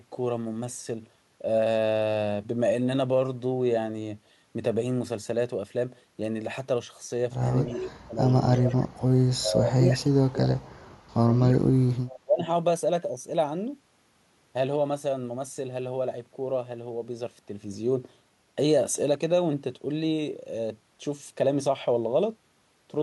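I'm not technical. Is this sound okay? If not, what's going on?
No, not quite. From 7.68 to 12.48 s the speaker keeps dipping or cutting out in pieces: 7.68–8.2, 8.71–8.89, 9.36–10.67, 11.12–11.34 and 12.2–12.48 s. That's speech suppressed in double talk, likely the call's echo canceller turning everything down while both sides talked at once.

There's also a faint, delayed copy of the voice, about a third of a second behind, at 8.29–8.75 and 12.08–12.19 s. That's echo leak, likely a loudspeaker on the other end whose sound wasn't fully removed and got sent back.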